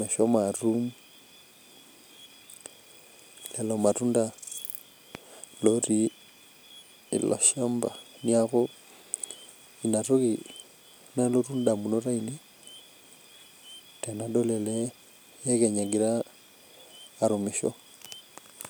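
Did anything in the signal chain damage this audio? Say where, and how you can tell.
Yes. A voltage step or pulse, likely from a plug, switch contact or static discharge in the analogue wiring, was added to the signal once, and the circuits after it shaped it into a loud pop from 5.15 to 5.18 s. It is a single sharp thump standing roughly ten decibels above the speech, lasting under 30 ms, while the speech carries on unbroken beneath it, the sign of something added rather than lost.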